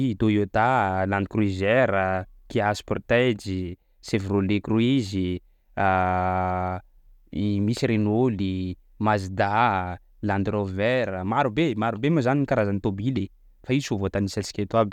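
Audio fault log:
Nothing stood out on listening to the speech.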